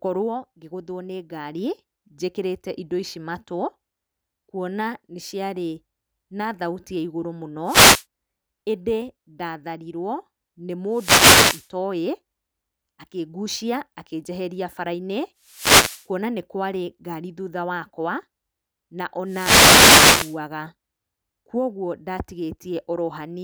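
Wireless microphone noise hits occur at 7.64–8.05, 10.90–11.69, 15.41–16.09 and 19.25–20.40 s. The radio signal fades, and bursts of static swish over the speech.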